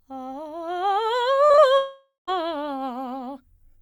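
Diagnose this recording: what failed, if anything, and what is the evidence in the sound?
Short concealed packet loss at 1.47, 1.52 and 1.56 s, a network fault: three back-to-back gaps of about 20 ms each smear the music from 1.47 to 1.60 s. The decoder bridged each hole by extending the preceding sound before blending back into real audio.

Long network dropout from 1.78 to 2.29 s: the music turns into a continued, fading version of itself, ending in about 0.14 s of silence. This is likely a half-second network outage, after which the music resumes without the lost stretch.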